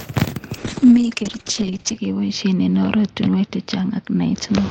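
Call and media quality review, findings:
Call bitrate drop from 0.58 s to end: speech turns rough and muffled, top cut from 20 kHz to 8 kHz. Encoder rate falls 40 to 7 kbps, lowest for 1.41 s. Continuous coarsening, no gaps or clicks, unlike packet loss.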